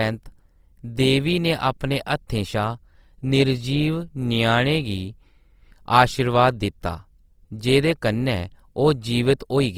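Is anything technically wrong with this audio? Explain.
Yes. Throughout, the speech sounds grainy and rough, likely from Opus compression in its music mode at a bitrate around 24 kbps, with thin bands filled by noise rather than left as MP3's swirling holes.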